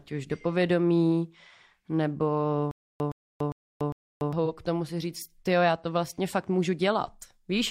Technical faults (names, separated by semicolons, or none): stutter with silent gaps; AAC frame loss with concealment